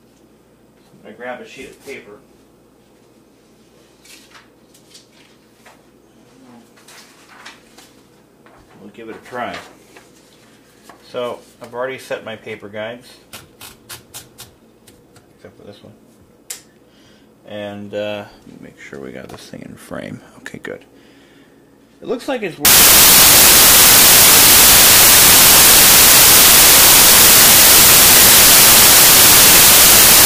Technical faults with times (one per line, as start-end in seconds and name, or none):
22.65-30.25 samples built from the wrong bytes